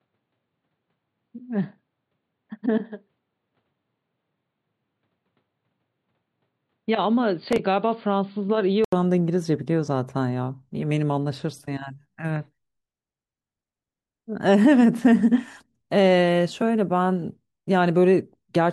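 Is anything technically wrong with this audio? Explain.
Yes, there are two faults.

Input switched to a poorer device, from 0.0 to 8.92 s: nothing above 4.7 kHz gets through, the level sits about 5 dB lower, and a faint new noise floor is present. This points to a narrower-band input, likely another microphone or headset profile. After an 80 ms silence the full sound returns.

Processor overload crackle, from 7.49 to 7.59 s: for about a tenth of a second the processor misses a run of deadlines on very short buffers of roughly 3 ms each. Each missed piece is skipped outright, leaving hard-edged gaps heard as a brief gritty tear.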